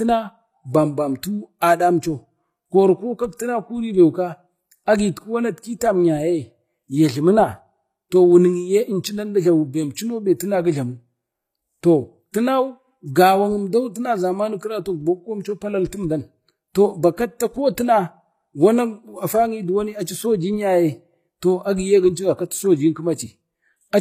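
Right from the start, the top end sounds synthetic. The treble is bright enough but gritty, and s sounds come out lispy and metallic, with nothing at all above 14.9 kHz. That's most likely HE-AAC compression. The codec keeps only the lower spectrum and fakes the highs by copying lower bands upward under a rough envelope, so the harmonics don't line up, and the damage is plainly audible. It fits a low bitrate, somewhere around 24 kbps.

At about 9.95 s there's a quick bit of pre-echo, a short hiss smeared about 13 ms ahead of a sharp attack, which softens its leading edge. The attack landed late in a transform block, and the codec spread that block's quantisation noise evenly across it. Noise scaled for the loud onset ended up filling the quiet instant just before it.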